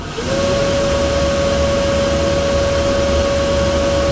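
Nothing in the recording stood out as a fault on listening.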